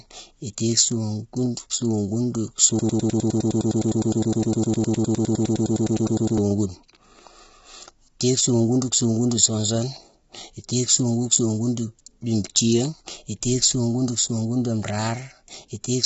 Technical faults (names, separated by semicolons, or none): low-delay AAC compression; broken-record loop